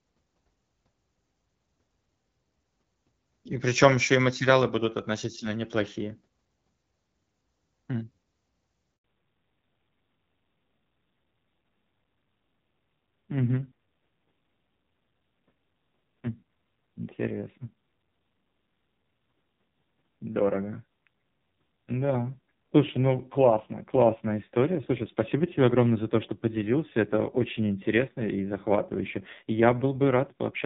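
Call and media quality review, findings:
Handover gap, 8.96 to 9.04 s: sound fades out within a few tens of milliseconds and stays silent for 80 ms during the network switch, with nothing spoken there recoverable. Unlike packet-loss concealment there is no smeared repeat or buzz, only true silence.

Fallback to narrowband, 9.04 s to end: content above 4 kHz gone, sound duller and rougher. The abrupt onset at the handover and the added coding grit, rather than just a softened top end, distinguish it from a low-pass filter. The sound fits a drop from AMR-WB at 12.65 kbit/s to AMR-NB near 5.9 kbit/s.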